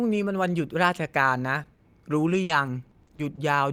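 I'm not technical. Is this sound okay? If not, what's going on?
No, there are a few hiccups in this speech clip.

At about 1.63 to 1.67 s there's a short concealed packet loss. A tiny slice of the call, about 20 ms, didn't arrive in time, so the receiving end guessed by stretching out the sound that came just before. You'd hear it as a quick smear or wobble, and a very short sound at that spot could get swallowed.

Right after, from about 1.73 to 1.81 s, comes a burst of packet loss. This time about 60 ms went missing in one go. The receiver kept the last sound going and let it fade, so you get a brief held buzz or hiss, and then the speech picks up a little further along, with that bit simply gone.

The longest stretch runs from about 2.33 to 3.39 s: repeated packet loss, which gives that robotic sound. The connection dropped pieces six separate times here, the longest about 60 ms, adding up to roughly 160 ms lost, about 15% of that stretch. 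Each hole gets patched with a guess, and the next one comes soon after, so the voice sounds choppy, with small pieces missing.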